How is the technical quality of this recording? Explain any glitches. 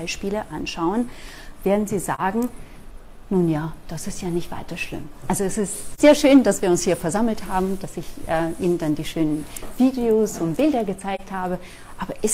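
Three brief dropouts interrupt the audio. AAC frame loss with muting occurs at 2.15 to 2.20 s, 5.92 to 6.00 s and 11.15 to 11.21 s. Each gap fits a single lost frame of about 43 ms whose spectrum the decoder zeroed, so overlapping windows fade the sound down and back up, leaving a brief dip.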